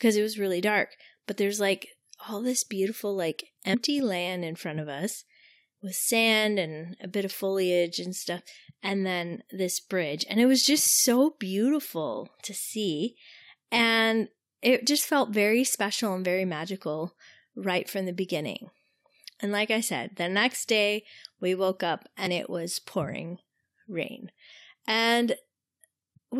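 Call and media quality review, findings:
Compressed frames skipped at 3.73 s (after "all this beautiful like") and 22.26 s (after "day we woke up"). Decoder dropped about three and two 23.2 ms frames, jumping roughly 70 ms and 50 ms ahead.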